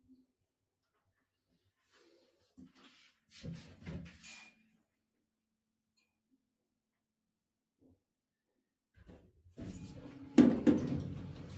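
All the way through, a noise suppressor built for speech is working on sound it wasn't designed for. It treats sustained tones and tails as noise, so the level keeps swinging by around 5 dB, pumping held material down while attacks slip past. The whole thing also stops at 8 kHz, which fits the call path.

The suppressor clamps down properly in four spots where it decides the sound is noise. From 0.01 to 2.01 s it drops by about 20 dB, from 2.17 to 2.77 s by about 13 dB, from 4.52 to 7.63 s by about 22 dB, and from 7.79 to 8.24 s by about 21 dB. Each time, the steady parts sink and the decays get chopped short.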